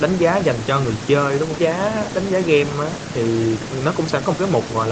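There are no technical faults to describe in this speech at any point in time, and the band-limiting to about 8 kHz comes from the call path working as it should.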